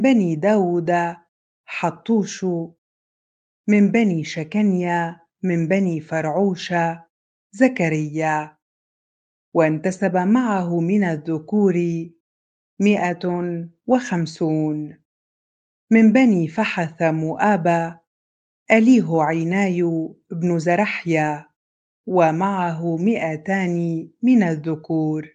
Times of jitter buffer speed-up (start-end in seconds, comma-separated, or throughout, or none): none